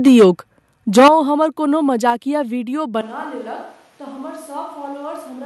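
From 0.06 to 0.25 s the speech has microphone overload. The peaks sit about 7 dB past the converter's limit, and a fair share of the waveform has its tops sheared flat. That gives the loudest syllables a harsh, crackly edge. The input gain was likely set too high. At 0.08 s, in the middle of that burst, the level drops in one clean step of about 2 dB. This is a microphone volume stepped down.

The overload returns harder from 0.97 to 1.08 s, at about 9 dB over. Here a large part of the signal is flattened, so the distortion sounds gritty and broken. At 1.08 s the level falls again, this time by about 9 dB. Voice and background sink together, right after the distorted peak. The call software likely lowered the device's input volume in response. A third step down comes at 2.10 s, just after "हमर कोनो", and is about 4 dB.

At 3.01 s the sound changes abruptly and stays changed to the end. 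This is a switch to a distant microphone. The voice turns roomy and hollow and loses its low end. It drops by roughly 10 dB. Room noise rises to sit only about 25 dB below the speech. The close microphone's feed was likely lost, leaving a farther pickup. Throughout, the Opus call coding is audible as a top end that stops near 12 kHz, which fits a 64 kbps setting.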